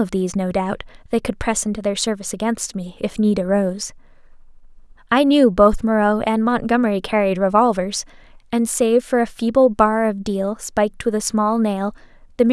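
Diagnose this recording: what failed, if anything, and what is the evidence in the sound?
No fault found in this recording.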